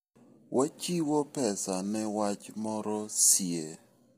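The speech is likely squeezed through low-delay AAC compression at a low bitrate, consistent with around 24 kbps. Short frames blur the pitch harmonics, so the voice sounds rough and grainy throughout, with noise filling the gaps between harmonics and a dulled, synthetic-sounding top band.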